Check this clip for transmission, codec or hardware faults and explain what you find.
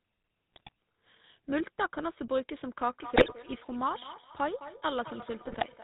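The speech carries three faults: GSM full-rate coding throughout, three bursts of GSM bit errors, and a feedback echo between two devices in the second half.

Throughout, the GSM full-rate codec rebuilds the voice from a vocal-tract filter driven by sparse, regularly spaced excitation pulses, discarding everything above 4 kHz. The result is a plainly audible buzzy, gravelly roughness with dull, band-limited highs, consistent with the 13 kbps full-rate coder.

GSM bit errors strike at 0.54 to 0.72 s, 3.16 to 3.33 s and 5.44 to 5.65 s. Corrupted bits on a weak radio link reach the decoder and scramble the filter, pitch or gain values of a run of frames, so each burst breaks into squawks, pops and gargling.

From 2.87 s to the end, a feedback echo between two devices appears. A second device in the same room replays what the first device's microphone sent, and the first microphone picks it up again, beyond the reach of its echo canceller. 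Each stretch of speech comes back about a fifth of a second later, at about -14 dB relative to the speech, thinner and more ringing with each pass.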